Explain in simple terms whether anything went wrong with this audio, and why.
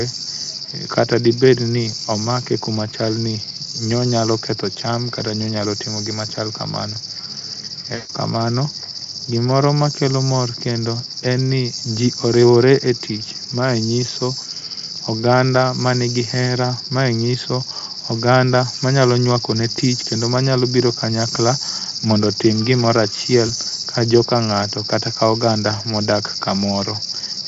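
The speech breaks up twice from VoIP packet loss concealed by the speech codec. At 7.95 to 8.12 s, and briefly at 23.47 s right after "kanyakla mondo otim gimoro", pieces went missing. The decoder stretched the last sound into a fading buzz or noise rather than silence, and the voice stays weak for a moment afterwards. The Speex codec carrying the call leaves only light damage.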